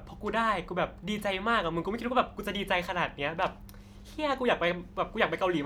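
No faults audible anywhere in the speech recording.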